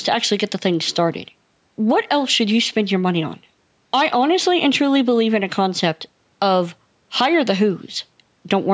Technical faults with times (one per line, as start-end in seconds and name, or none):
none